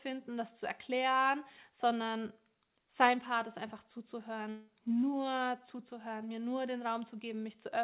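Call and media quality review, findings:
Long network dropout, 4.5 to 4.7 s: stream likely interrupted for about 0.2 s, receiver concealment extending the last sound as a fading buzz across almost the whole gap, no true silence, then resumes at "nur zuzuhören mir nur" with roughly 180 ms of audio lost. The call path runs through G.711 A-law at 64 kbps, with nothing above 4 kHz.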